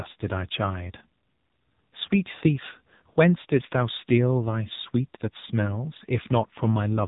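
Throughout the speech runs through an AMR narrowband mobile codec, heavily damaged: buzzy and synthetic, fitting a low mode near 6.7 kbps. The vocal-tract model starves for bits. A spectrogram shows a flat ceiling at 3.8 kHz with nothing above.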